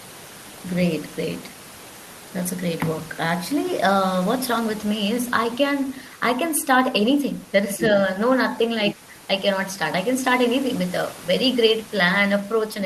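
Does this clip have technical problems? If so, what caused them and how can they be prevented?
Yes. Other side's voice leaking through appears from 7.80 to 7.85 s as a brief scrap of a second voice, sitting roughly 10 dB below the main speech. The likely cause is that the talker's device was playing the far end over a loudspeaker, the microphone picked that playback up, and the echo canceller failed to subtract all of it. Using a headset, or better echo cancellation with lower speaker volume, would prevent it.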